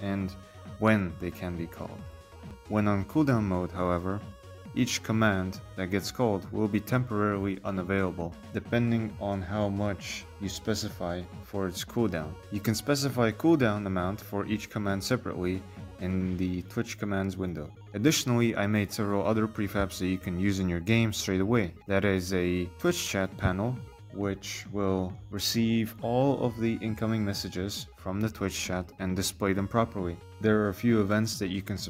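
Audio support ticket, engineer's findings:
Repeated buffer at 2.50 s, heard as a quick click. Output underrun: device replayed its last roughly 6 ms chunk once, which fits a 256-sample buffer.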